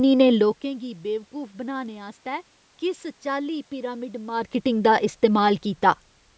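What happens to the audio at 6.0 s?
At 6.0 s the speech carries on intact, with no dropout, click, distortion or other fault at that point.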